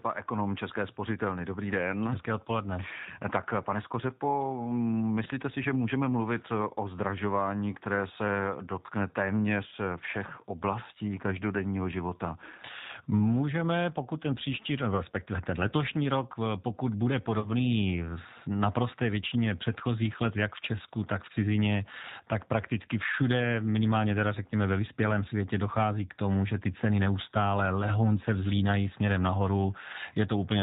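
G.729 coding runs through the whole 31-second speech recording, and the damage is plainly audible: the voice has the rough, slightly synthetic quality of a decoder rebuilding each 10 ms frame from a vocal-tract filter, a pitch predictor and a few pulses. Nothing above 4 kHz comes through, so sibilants are dull and thin, which fits the 8 kbit/s G.729A variant. VoIP packet loss concealed by the speech codec then breaks in at 5.24 to 5.28 s and again at 17.40 to 17.48 s. Each gap fits one lost 20 ms packet. The decoder fills it by extending the last pitch and filter while turning the gain down, so the speech smears into a short buzzy tone or coloured noise that fades. Because each frame builds on the one before, the voice stays weak or distorted for tens of milliseconds or more after the packets resume.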